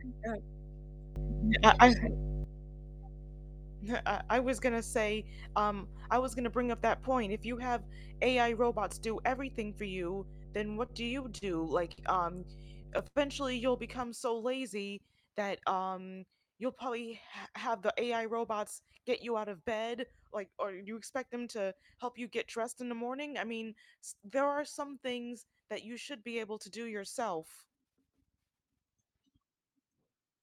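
Speech recording with several faults. Mains hum at 50 Hz runs from 0.0 to 14.03 s, a steady low tone nearly as loud as the speech, typical of a ground loop or nearby transformer. From 1.16 to 2.44 s a sudden gain jump raises speech and background together by 12 dB, likely a digital gain change applied without a ramp. Between 10.45 and 11.44 s repeated stalls (stutter) break the flow with six held gaps, the longest 40 ms, totalling 104 ms, as late packets repeatedly emptied the jitter buffer. Short stalls from late packets follow at 11.92 s, held 57 ms, and at 13.07 s, held 86 ms, with the sound stretched until playback resumed. From 15.71 to 17.09 s a jitter buffer speed-up plays the speech at 109% speed with unchanged pitch, trimming around 150 ms to reduce excess buffered delay.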